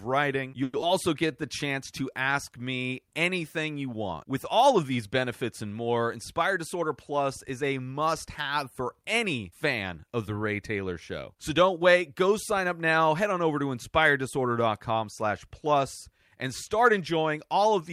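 At 0.63 s packets were likely held up in transit and the jitter buffer ran dry, producing a call audio freeze lasting until 0.75 s. The receiver kept the last sound going to cover about 100 ms, heard as a short buzzy continuation that thins out before the real audio resumes. Because the speech picks up where it stopped, nothing is lost, but a gap has been inserted and the call now runs about 100 ms further behind.

From 0.81 to 0.84 s there is short concealed packet loss. About 40 ms of speech never reached the decoder in time. The receiver synthesised only about 10 ms of substitute sound by extending what came before, then blended into the next audio that did arrive. The result is a quick smear or wobble where a sliver of speech simply drops out. Skipping that material pulled the playout delay back by roughly 30 ms.

Between 1.27 and 1.46 s, just before "chance to ask me", a jitter buffer slow-down sets in. 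The receiver was short of buffered audio, so it built a reserve by repeatedly duplicating single pitch periods and bits of pause, adding 35 ms in all. The speech there plays at about 86% of normal speed with its pitch unchanged. Sounds are drawn out, and a faint warble may come from the repeated cycles.

From 6.52 to 8.02 s, between "these benefits and more" and "have for any fan", a jitter buffer speed-up works the other way. The buffer held more audio than its target, so the receiver cut short pieces of one or a few pitch periods again and again, removing roughly 100 ms. Over that stretch the speech runs at about 106% of normal speed with its pitch intact, and it sounds mildly hurried.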